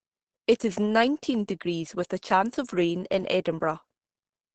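Throughout the speech, heavy Opus compression is likely at work. The encoder seems to be in its SILK speech mode, at a rate that fits about 12 kbps, leaving the sound muffled and hoarse. On a spectrogram everything stops at a flat ceiling near 8.5 kHz.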